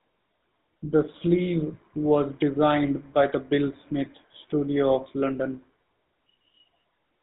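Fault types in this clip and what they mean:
GSM full-rate codec: buzzy, gravelly roughness throughout the speech, fitting 13 kbps GSM coding; the spectrogram shows nothing above 4 kHz and smeared, pulse-driven harmonics.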